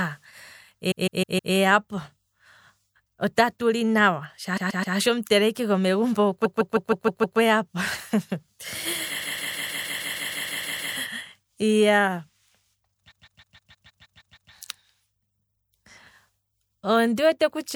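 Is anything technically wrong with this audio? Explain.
Yes, there are repeated frames, five bursts of them. At 0.90–1.53 s a block of about 157 ms plays four extra times. At 4.56–4.95 s a 131 ms block repeats three extra times. Then 157 ms blocks loop six times at 6.44–7.38 s, eleven times at 9.21–10.94 s, and nine times at 13.10–14.51 s. A run of compressed frames got fed to the decoder more than once, so the speech stutters on the same fragment. The loops add about 5 s to the clip.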